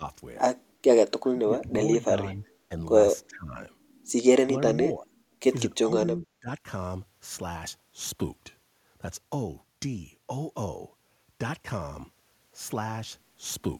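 Speech suppressed in double talk at 0.0, 1.23, 2.07, 3.28, 4.46, 4.96 and 5.83 s: the speech sags or partly drops out, by up to roughly 25 dB, likely an echo canceller muting the talker during overlap. These show as waveform notches and faded spectrogram bands.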